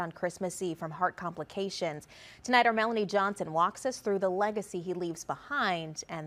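No technical faults detected.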